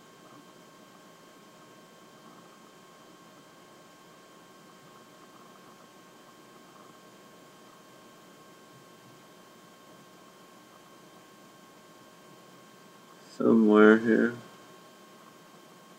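Around 3.38, 4.87 and 12.03 seconds there are compressed frames skipped: the audio jumps ahead by roughly 30 ms, then about 50 ms twice, which fits dropping one and then two 26.1 ms frames.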